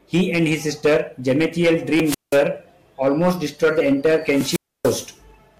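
Throughout the speech, hard clipping from roughly 12 dB of overdrive flattens a few percent of peaks into harsh fuzz; waveform tops look squared, with harmonics smeared high across the spectrogram. From 2.04 to 2.39 s and again from 4.26 to 5.12 s, wireless microphone squelch dropout occurs as the radio signal fades. Hiss rises, then the receiver mutes for 182 ms and 288 ms, appearing as broadband noise followed by blank gaps.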